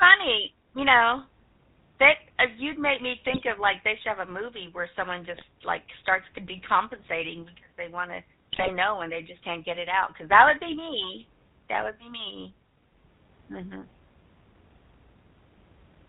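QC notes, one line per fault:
throughout: GSM full-rate codec. The speech has passed through a vocal-tract model excited by a sparse pulse train, consistent with the 13 kbps full-rate coder, and nothing survives above 4 kHz. The discarded excitation detail leaves the voice plainly buzzy and gravelly, with a dull, band-limited top end where sibilants lose their hiss.
3.3–3.45 s, 5.31–5.45 s, 8.52–8.69 s, 11.79–11.86 s: GSM bit errors. Corrupted bits reached the decoder in short bursts, each spanning a handful of 20 ms frames and pointing to an error rate of around 1 to 3 percent. Damaged filter, pitch and gain parameters distort the spectrum and throw the level around, so each burst sounds like a brief squawk, pop or gargle. The 11.79 s burst is the shortest and mildest. The 8.52 s burst is the longest and harshest.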